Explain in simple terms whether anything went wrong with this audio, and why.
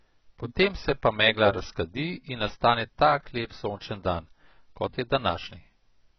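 The speech sounds dull and smeared from start to finish. Nothing is heard above 6 kHz, so the crisp top end is missing. Hissing sounds turn fizzy and warbly. The likely cause is heavy AAC compression, which discards detail to shrink the file.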